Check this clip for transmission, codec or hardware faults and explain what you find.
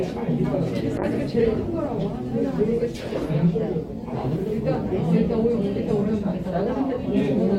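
One transmission fault stands out: a call bitrate drop running from 0.99 s to 5.93 s. Over that stretch the sound turns rough and watery, losing its top end and sounding muffled, worst for about 2.1 s at its lowest point, before clearing again. The call's bandwidth estimate fell and the encoder was told to spend far fewer bits. The coarser coding fits a fall from around 128 kbps to about 21 kbps, where Opus also trims the high frequencies.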